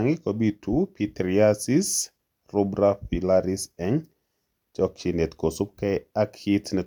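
A short speech recording, with no technical fault to be heard anywhere in it. There is nothing here to pin to a time or trace to a cause.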